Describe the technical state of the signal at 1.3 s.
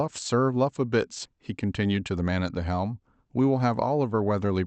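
Around 1.3 s the audio has just passed a skip ahead at 1.25 to 1.27 s. The playback jumped forward over roughly a second of speech, with nothing filled in, so the two sides butt together almost seamlessly. Unlike a dropout or concealed packet loss, there is no silence or smeared filler, only missing content.

Right after, from 1.36 to 2.32 s, a jitter buffer speed-up trims short pitch-period pieces, about 150 ms in total, so the speech runs at 112% and sounds hurried. Because whole periods are cut, the pitch stays unchanged, which separates it from a resampling-style speed-up that would raise the pitch.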